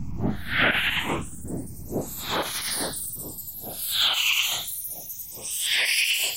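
Channels drifting apart runs throughout this recording of sounds. The left and right sides come from separately clocked devices about 50 ppm apart, so their offset slides to under half a millisecond by the end, and summed to mono the comb notches sweep slowly, giving a slow flanging.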